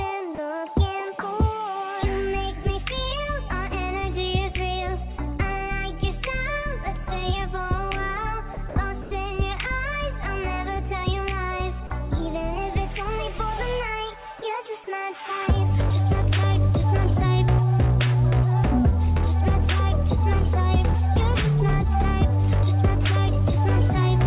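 At 0.35, 8.54, 8.69, 9.02 and 11.87 s, the sound briefly gives way to flat, steady hiss for 30 to 90 ms. This is sound dropped by the voice detector, likely mistaking quiet passages for background, with comfort noise filled in. A spectrogram shows uniform noise patches in the band-limited, sub-4 kHz call audio, and the waveform shows low, even stretches.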